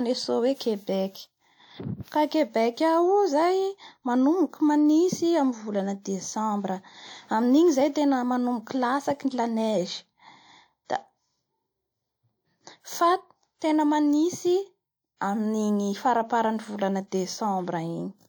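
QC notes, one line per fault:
10.85–10.90 s, 13.58–13.62 s (just before "tena manintsy") and 15.17–15.21 s, pre-echo: the codec spreads noise meant for each loud attack across its whole block, so a short hiss of 33 to 47 ms softens the onset. Spectrograms show broadband smears ahead of the transients, and waveforms show low fuzz before the attacks.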